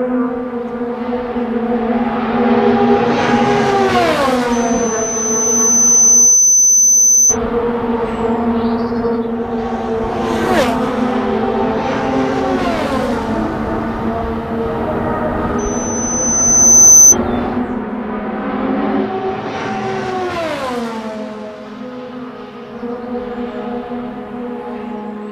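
At 4.52 s a loudspeaker feedback squeal begins. A microphone is picking up the speaker it feeds, and at 6.1 kHz the loop gain exceeds one. That single tone swells over about two seconds to roughly 10 dB above the sound, then stops at 7.37 s. It returns at 15.58 s at the same 6.1 kHz. This time it builds faster, in about a second and a half, and peaks near 15 dB above the sound. It ends at 17.16 s.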